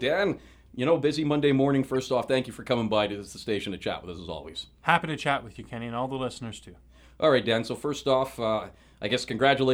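At 1.95 s there is a brief blip, a corrupt frame decoded. Flipped bits reached the decoder inside what sounds like a single compressed frame, and it played the frame regardless. Misread values scattered energy to wrong frequencies. The chirp peaks around -30 dBFS.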